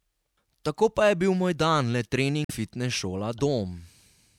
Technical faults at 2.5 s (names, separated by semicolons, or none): damaged data in a compressed stream